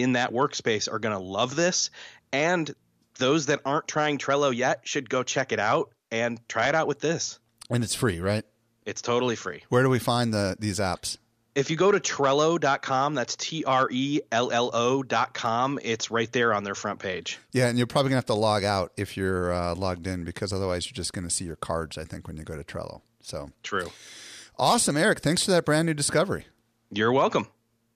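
From 6.64 to 6.78 s, between "check it out and" and "out with this", DAB burbling gurgles over the speech. Weak reception lets a small fraction of bit errors slip into the MP2 data, so single sub-bands jump in level. On a spectrogram this appears as blocky, frame-long patches flaring in isolated bands.

At 15.46 s, just before "it's right there on", a sharp snap cuts through. It is likely an electrical switching spike picked up from a nearby arc, and it shows on the waveform as a needle-thin vertical spike.

From 22.54 to 22.61 s, after "think when you go", a shorter DAB burbling patch returns, consistent with only a few corrupted frames. It appears as scattered band-limited blocks.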